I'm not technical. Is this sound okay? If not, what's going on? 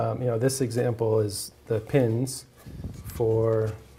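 Yes, nothing in this recording points to a technical problem.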